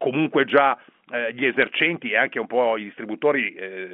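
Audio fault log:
1.62–1.67 s, bit errors on a digital phone line: a short burst of sharp ticks over the speech on this G.711 A-law call. A low error rate, around a fifth of a percent, flipped bits so that single samples jump; sign or high-bit hits give the clicks.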